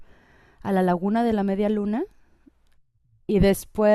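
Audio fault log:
Nothing to log here; the speech runs along without a single fault turning up anywhere.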